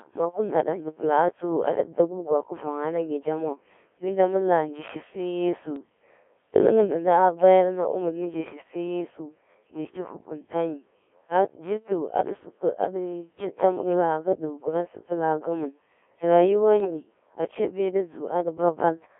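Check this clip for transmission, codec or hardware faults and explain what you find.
Two faults show up: the whole clip runs through a Codec 2 vocoder, and there are two short bursts of bit errors on a digital voice radio link.

The Codec 2 vocoder damage runs from start to finish. The speech is rebuilt from pitch, voicing, energy and a rough spectral envelope rather than the real waveform. That leaves it heavily robotic and buzzy, squeezed into 300 Hz to 3.4 kHz, and the sound fits a very low-rate mode around 1.3 kbit/s.

The bit errors on digital voice radio hit at 5.76 to 5.89 s and again at 16.80 to 16.90 s. Flipped bits, a few percent of them, corrupt the few parameters each frame carries. The voice lurches in pitch, level and timbre and breaks into warbly, bleepy gibberish for a moment.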